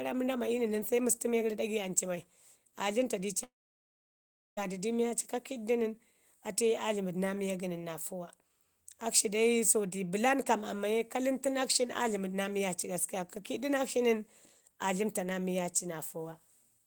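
At 3.43 s, right after "dləmta dii ci", the speech stops short. The last sound smears on briefly as a fading buzz. Then near-silence holds for about 1.07 s. Speech returns at 4.59 s, but roughly 1.14 s of it is simply gone, with no catch-up. This is likely a long network dropout. The audio stopped arriving, the receiver stretched the final sound to cover the gap, and the stretch quickly gave way to silence.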